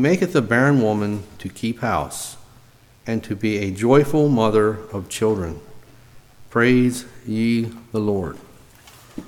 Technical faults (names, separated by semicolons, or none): mains buzz